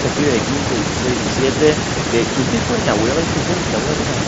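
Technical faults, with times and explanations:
No technical faults are present in this speech clip. The audio carries the wideband Bluetooth headset sound of the mSBC codec, with speech reaching up to about 8 kHz and a light codec graininess on the louder passages.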